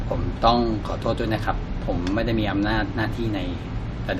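No technical faults can be heard anywhere in the recording; the signal stays intact and continuous throughout.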